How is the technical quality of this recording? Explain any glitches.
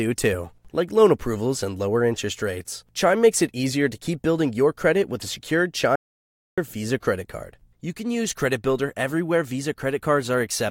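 The recording has one clear glitch. From 5.96 to 6.58 s, right after "credit with a secured", there is an audio dropout to silence lasting 0.62 s, likely from the input briefly disconnecting or muting while the recorder kept writing silence. Speech stops abruptly and resumes mid-flow. Unlike a natural pause, the gap holds no room tone at all, just silence, and whatever was said then is lost.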